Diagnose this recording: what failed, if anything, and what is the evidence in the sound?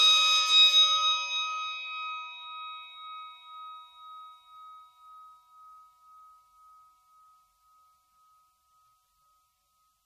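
The codec stage is at fault, and the cause is likely MP3 compression. Throughout the music, nothing sounds above 15.1 kHz. The treble stops dead there. Weak detail swirls and turns watery, with chirpy, metallic edges on bright sounds. Attacks smear. The damage fits a starved bitrate near 40 kbps.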